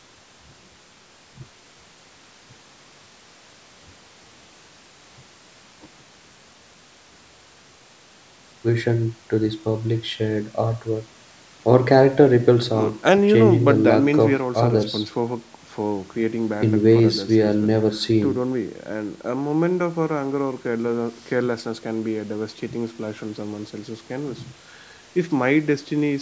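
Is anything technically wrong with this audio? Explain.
No, the speech shows no technical faults, and what can be heard is simply the normal effect of call microphone processing, with the lowest bass filtered out and nothing above 8 kHz.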